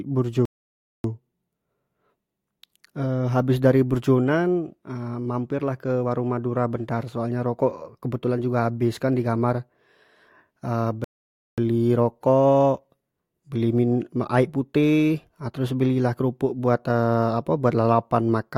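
A speech recording with two rebuffering stalls: the playback goes silent from 0.45 to 1.04 s and again from 11.04 to 11.58 s, each time picking up exactly where it left off. The player ran dry and waited for data, adding about 0.59 s and 0.54 s without losing any audio.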